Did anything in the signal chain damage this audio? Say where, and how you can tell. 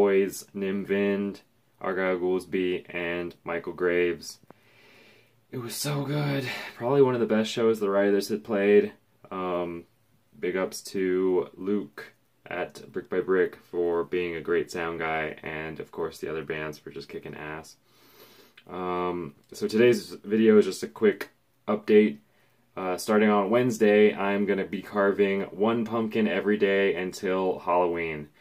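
No, nothing in the signal chain stood out as damaging on listening.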